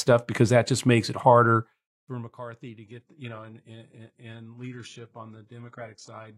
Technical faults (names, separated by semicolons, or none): zipper noise; adaptive stream at a lower bitrate